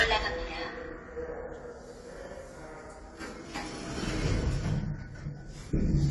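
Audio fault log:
throughout, AAC compression: likely low-bitrate AAC-LC coding, consistent with about 32 kbps, which dropped high bands and starved the rest of bits. Nothing sounds above 11.5 kHz, so the sound is dull and smeared, with a plainly audible warbling, fizzy texture.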